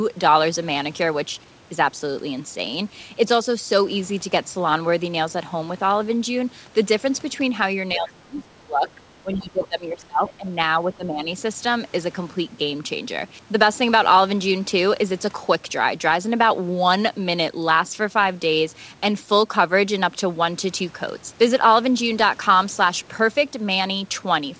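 Between 7.93 and 8.96 s, 9.21 and 10.5 s, and 10.8 and 11.29 s, the speech sinks by up to about 25, 20 and 10 dB. This is speech suppressed in double talk, likely an echo canceller treating the talker as loudspeaker echo.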